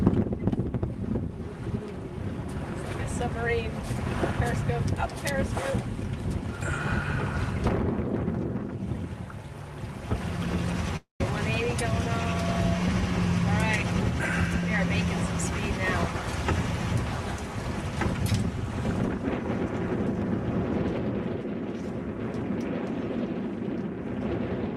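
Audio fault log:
10.96–11.21 s, long network dropout: the sound turns into a fading buzzy continuation of what came just before, drops to 130 ms of near-silence, then resumes with 240 ms of material gone. This likely reflects a stall in packet delivery that the receiver papered over.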